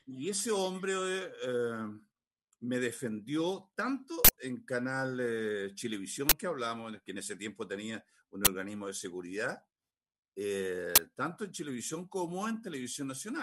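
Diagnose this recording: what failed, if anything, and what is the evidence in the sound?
An uninitialised buffer fault at the driver or buffer stage: blocks went out before audio was written into them, so leftover memory played as samples. Loud digital-noise bursts hit at 4.25–4.29 s (43 ms, fitting a 2048-sample buffer), then 6.29–6.32, 8.45–8.47 and 10.96–10.98 s (21 ms each, fitting 1024 samples).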